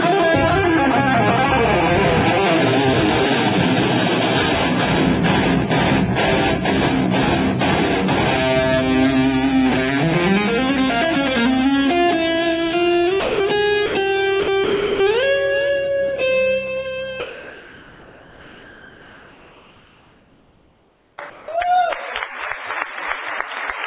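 Between 13.2 and 15.0 s there's sound dropped by the voice detector, likely because the sender's detector mistook real sound for background. It's swapped for steady noise at 13.2–13.4, 13.86–13.94, 14.4–14.48 and 14.64–15.0 s, and the sound comes back each time.

Then from 17.2 to 21.18 s, and again at 21.3–21.48 s, there's comfort noise in place of the background, likely a transmission pause filled with synthetic noise. The first stretch holds the same level as the real background. The second drops about 4 dB. Throughout, nothing reaches above 4 kHz, which fits a narrowband call codec.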